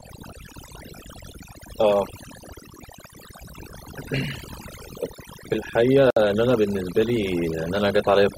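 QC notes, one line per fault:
throughout: overdone noise removal. The background falls to near silence, broken by twinkling specks that come and go, and the speech has its softer detail hollowed out. A noise reduction stage was pushed too hard on a noisy recording, so any frequency band close to its noise estimate is cut deeply or shut off entirely. The quieter parts of the voice sit in that same range and get removed with the hiss.
6.10 to 6.16 s: gap at a join of encoded pieces. The speech drops out for about 61 ms and then resumes exactly where it stopped, with edges that are smeared rather than clean. Separately encoded pieces were joined without trimming. The silent start-up delay from one encoder run and the padded final frame from the other both stayed in the stream, which opens a short hole in otherwise continuous sound. The codec smears those edges.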